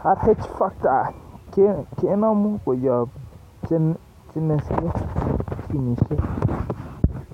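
No technical faults can be heard in this recording.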